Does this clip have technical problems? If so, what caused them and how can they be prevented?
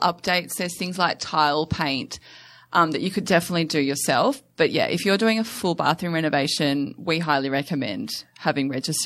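No, there are no technical problems to report.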